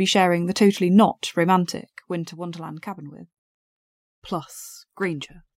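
A gain change in this speech clip is applied in small unsmoothed increments rather than as a continuous ramp, producing zipper noise from 1.59 to 2.33 s, just after "sharing the totally not". The level drops by roughly 10 dB in steps arriving at around 300 a second, and each jump leaves a tiny discontinuity in the waveform. Together these form a fine ticking, zipping texture that rides on the sound while the level falls.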